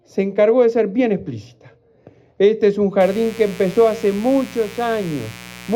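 A mains buzz enters at 3.01 s and runs to the end of the clip, sitting roughly 20 dB below the wanted sound. It is a 60 Hz buzz. Sharp switching spikes, of the kind a dimmer or rectifier produces or an unshielded line lets in, arrive twice per mains cycle and spread harmonics well into the kilohertz range. That spiky, raspy character sets it apart from plain hum, which stays a smooth, low tone at 60 or 120 Hz.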